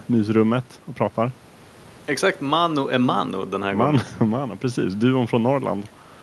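The speech signal carries no technical faults, with the room's own background sitting about 29 dB beneath it as part of the recording.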